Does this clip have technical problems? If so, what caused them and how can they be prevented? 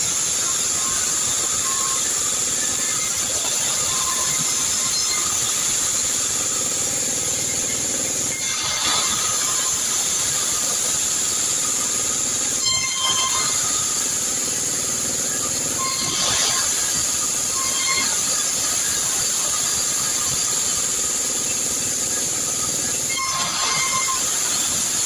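No, nothing stood out as a technical problem on listening, so there is nothing here that calls for a cause or a fix.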